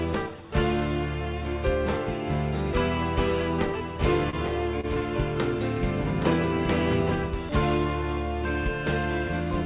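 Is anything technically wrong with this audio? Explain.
Yes, there are two kinds of problem here.

From 3.74 s to 7.49 s you get a doubled audio track: a second, full-band copy of the same audio trails the original by roughly 0.7 s, about 10 dB down. It's dry, with no room tail, and it switches in and out abruptly at both ends. That's likely a second capture of the same source arriving through a slower route, so the two copies sit out of step and smear everything in that stretch.

Inside that window there are two short stalls from a late packet, at 4.30 to 4.35 s and 4.81 to 4.85 s. Each time a packet showed up late, the jitter buffer ran dry, and the receiver held the last bit of sound for about 26 ms and then 28 ms until the packet arrived. Nothing is lost, but the audio hangs for a moment with a faint buzz or dip before carrying on.

The call path itself band-limits everything, with nothing above 4 kHz, which fits G.711 mu-law at 64 kbps.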